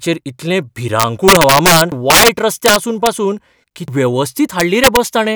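Integer overflow hits the speech at 1.00 to 1.81 s, 2.10 to 2.28 s, 2.66 to 3.07 s and 4.60 to 4.97 s. The level there is driven about 6, 11, 6 and 3 dB past the integer limit, and the arithmetic wraps instead of saturating, so each peak that crosses full scale jumps to the opposite extreme. The result is violent cracking on the loudest syllables, harsher than ordinary clipping and worst in the 2.10 s burst. Damaged data in a compressed stream causes brief glitches at 1.92 s and 3.88 s. At each point the decoder meets corrupted bytes, loses frame sync and searches for the next valid header, leaving a short blip.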